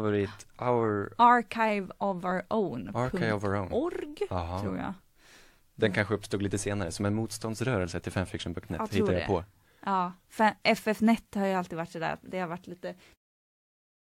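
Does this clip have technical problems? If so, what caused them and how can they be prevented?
No, this speech recording shows no technical problems, and the level easing down from about 13 s to 13.17 s is an ordinary editorial fade-out with no step or click, so nothing here needs preventing.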